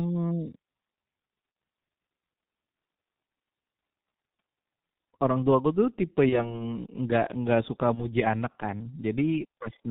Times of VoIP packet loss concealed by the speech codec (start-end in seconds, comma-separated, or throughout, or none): 1.52-1.55, 6.29-6.62, 7.95-8.06